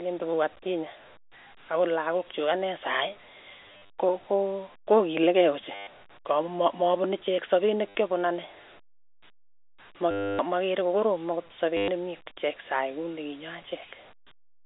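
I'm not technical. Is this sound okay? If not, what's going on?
No. There is packet loss with last packet repeated: chunks of audio went missing, and the last piece was replayed in their place. You'll hear brief robotic stutters at 3.66–3.98 s (before "ko kokokilikei"), 5.75–5.87 s, 7.94 s, 10.11–10.39 s (before "makere ko koroom akot") and 11.77–11.88 s (after it).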